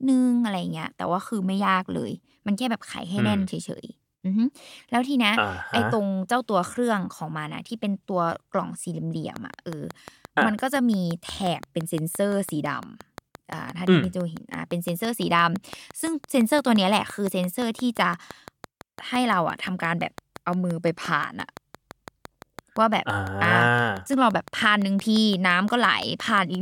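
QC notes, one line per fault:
9.36–26.56 s, train of clicks: a regular ticking pulse arrives about 5.8 times per second, around a hundred clicks in all. Each click has much the same shape and peaks roughly 5 dB above the speech, audible in pauses too. Likely electrical interference or a faulty connection or power supply.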